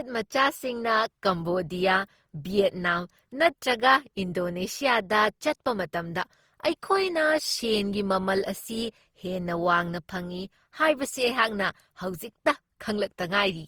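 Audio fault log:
Throughout: generation loss; speech sounds swirly, hollow and smeared with blurred attacks, likely from about seven Opus passes, consistent with 48 kbit/s, compounding quantisation noise.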